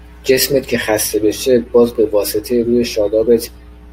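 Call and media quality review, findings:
Mains hum, present throughout the speech. Ground loop or nearby transformer coupling 60 Hz power into the capture path, so a steady low tone with some low harmonics sits under everything, roughly 25 dB below the speech.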